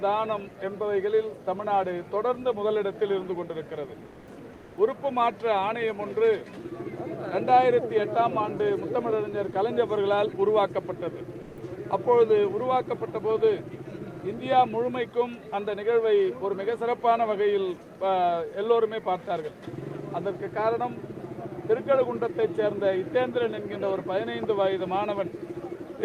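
The audio has two short stretches where the real background is swapped for comfort noise, from 4.05 to 4.27 s and from 4.53 to 4.77 s. The background, about 23 dB below the loudest passages, gives way to a smooth, featureless hiss about 4 dB and then about 2 dB quieter. On a spectrogram the background's texture turns into even, evenly shaded noise with a slight dip in level. The likely cause is discontinuous transmission of the Opus DTX kind, where the receiver synthesises noise while the sender stays silent. At 11.41 to 11.57 s a brief piece of sound, roughly 80 ms of it, is dropped by the voice detector and replaced by about 160 ms of steady noise before the sound resumes. In the waveform this shows as an abrupt flat, low-level gap cutting into active signal, and on a spectrogram the sound's structure vanishes into uniform noise. This is likely the sender's detector mistaking quiet sound for background and halting transmission.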